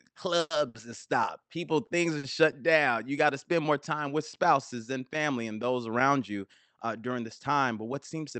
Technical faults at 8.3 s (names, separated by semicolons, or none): none